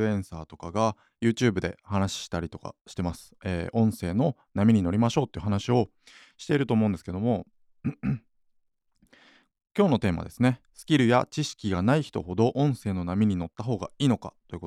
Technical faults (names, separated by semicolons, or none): none